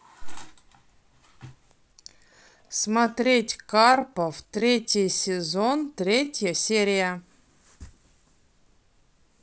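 From 1.89 s to 6.43 s the speech abruptly slows while its pitch stays unchanged, and it drags. This is a time-stretched section, likely from software lengthening the passage to 0.733 times its speed by repeating short fragments.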